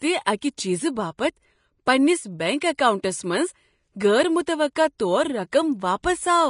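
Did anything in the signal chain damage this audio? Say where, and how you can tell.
Yes, at the codec stage, for the whole speech clip: nothing survives above 10.6 kHz, and the remaining treble is hissy and grainy, with softened consonant attacks. This is likely Vorbis compression at a low bitrate, around 34 kbps, coarsely quantising the high-band residue into noise.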